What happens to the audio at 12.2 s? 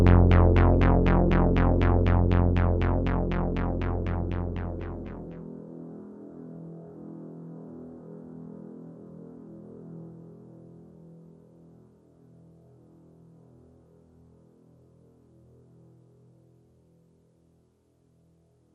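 At 12.2 s the sound is dull and grainy, with a gurgling edge. This runs through the whole clip. The likely cause is MP2 compression at a low bitrate, near 80 kbps. Starved of bits, upper sub-bands switch off and flicker, while the remaining bands are coarsely quantised.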